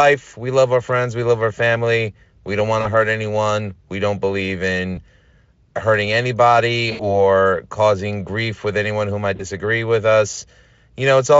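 At 2.81 s, at 4.95 s after "don't believe", at 6.91 s after "hurting anybody" and at 9.35 s after "with anyone who might", VoIP packet loss concealed by the speech codec smears the sound. The decoder keeps replaying its last pitch and filter with falling gain, so each gap, roughly 40, 20, 80 and 40 ms, fitting lost 20 ms frames, becomes a fading buzzy tone or coloured noise rather than silence or a click, and the speech stays thin briefly afterwards.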